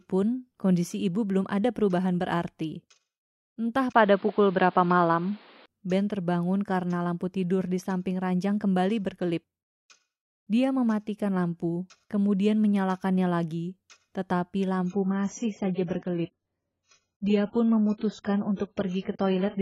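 At 3.92 s the speech turns dull and boxy after a 20 ms dropout, with nothing above 5.1 kHz, a level shift of a few decibels and new background noise about 30 dB down until 5.68 s. The likely cause is an input switched to a poorer device.

From 14.86 s to the end, the treble suddenly thins, with nothing above 7.6 kHz and smeared codec artefacts, though there is no gap. This is an adaptive stream at a lower bitrate, which fits a step from about 96 down to 12 kbit/s AAC.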